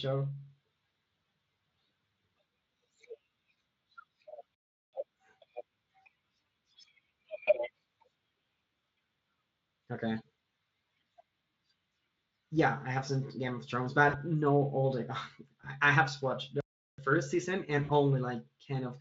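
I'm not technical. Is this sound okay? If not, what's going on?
No. Twice, at 4.55 to 4.93 seconds and 16.61 to 16.98 seconds, there is a playback stall, likely because the player ran out of audio data. The speech simply cuts to silence for about 0.38 seconds, then carries on.

There is also VoIP packet loss concealed by the speech codec, at 7.43, 14.09, 15.61 and 17.83 seconds. Small pieces of the call, 20 to 60 milliseconds long, went missing, and the decoder guessed what should be there. Each spot sounds like a brief buzzy or hissy smear.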